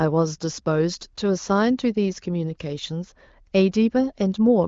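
No faults are audible anywhere in this speech recording.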